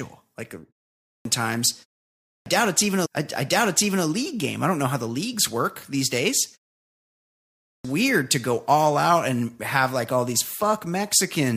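An output device that drops into a low-power state during short gaps and is slow to wake is the cause of the clipped start after a pause that recurs in this speech recording. The first stretch of sound after each silence is lost. It happens at 0.97 s after a 0.33 s pause, losing about 0.28 s. At 2.15 s, after a 0.38 s pause, roughly 0.31 s is lost just before "it's even a league". At 7.58 s, after a 1.09 s pause, about 0.27 s vanishes ahead of "to go all out". Each time, speech bursts out of silence already underway, its onset missing. Separately, the player queued one stretch of the stream twice, producing a stream segment repeated from 3.04 s to 4.04 s. Right after "it's even a", close to 1.0 s of material plays again, with a small blip at the jump back, before the speech continues with "league game I don't". The repeat stretches the recording by that second.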